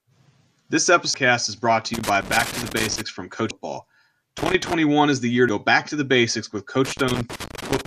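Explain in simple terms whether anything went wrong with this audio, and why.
Two kinds of fault break into this speech recording.

The first is damaged data in a compressed stream. Part of the stored file was corrupted. At those points the player could not read the data correctly and lost its place. It then had to search for the next readable chunk. You hear this as a sudden chirp or blip. It happens three times: at about 1.14 s, at 3.50 s, and from 5.49 to 5.52 s. Each one is very brief.

The second is loose connector crackle. A worn or dirty plug or contact kept losing and regaining connection as it moved. That chops the signal on and off very quickly. You hear an uneven burst of crackling or scratching over the speech. It runs from 1.94 to 3.01 s, again from 4.38 to 4.73 s, and finally from 6.85 s until the recording ends.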